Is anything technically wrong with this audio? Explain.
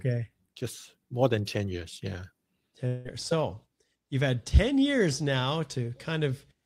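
Yes, there is a gap in the speech. From 2.87 to 3.07 s there is a long network dropout: about 0.18 s of speech never plays. The receiver likely stopped getting audio and filled the hole by extending the last sound, which comes out as a buzzy, fading smear rather than silence. The speech then resumes with that stretch missing. On a spectrogram the harmonics flatten into smeared horizontal bands that fade until the speech reappears. The waveform shows a decaying, repetitive envelope instead of speech-shaped bursts.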